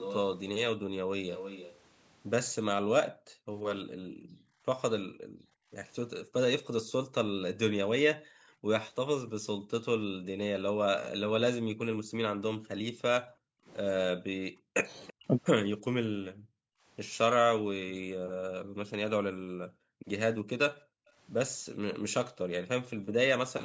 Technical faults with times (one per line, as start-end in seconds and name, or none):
0.00-0.16 echo leak
0.77-1.10 speech suppressed in double talk
1.31-1.77 echo leak
2.81-5.71 speech suppressed in double talk
6.25-8.68 speech suppressed in double talk
9.23-16.86 speech suppressed in double talk
15.07-15.13 echo leak
17.59-23.15 speech suppressed in double talk